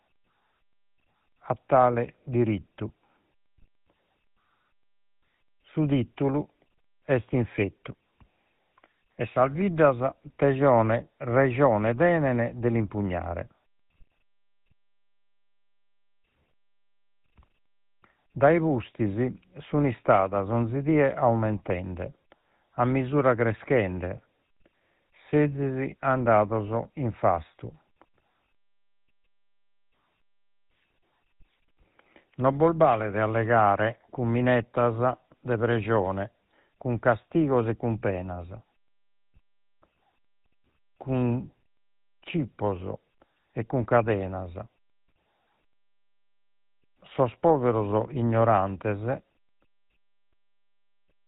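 GSM full-rate codec damage runs throughout the speech, from start to finish. The coder builds a simple model of the vocal tract and feeds it a sparse, evenly spaced pulse train, discarding most of the excitation detail, and the result fits the old 13 kbps full-rate scheme. Nothing survives above 4 kHz, so the speech sounds dull and band-limited, and the thinned excitation leaves a plainly audible buzzy, gravelly roughness on the voices.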